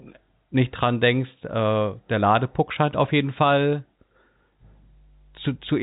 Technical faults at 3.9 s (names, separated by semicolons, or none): none